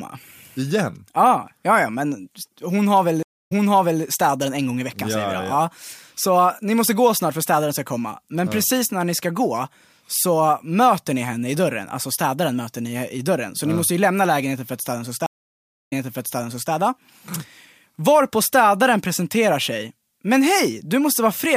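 Stream reconnect at 3.23 s, after "men hon har väl": the connection drops, leaving about 0.25 s of silence. A fresh decoder then resumes 0.55 s earlier, so a stretch repeats before "städaren en gång i". It recurs at 15.26 s, after "för att städaren ska", with 0.6 s of silence and a 0.86 s jump back.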